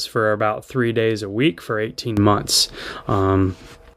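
It's a short speech recording with a sudden gain jump at 2.17 s: the level leaps up by about 12 dB in one step, background noise rising right along with the voice, and stays there until 3.94 s. Likely a digital gain change applied without any ramp.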